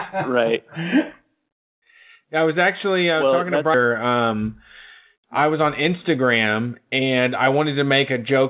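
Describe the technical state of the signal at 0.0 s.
At 0.0 s the speech is intact, carried through the WebRTC call path with the narrow telephone band of G.711 mu-law, which leaves nothing above 4 kHz.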